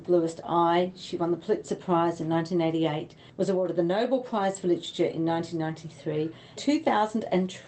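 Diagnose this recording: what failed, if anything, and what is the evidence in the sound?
Nothing failed: the audio arrives through a WebRTC call path whose high end stops around 8 kHz, consistent with Opus in wideband mode at roughly 20 kbps, and the coding and jitter buffering sound as that path should.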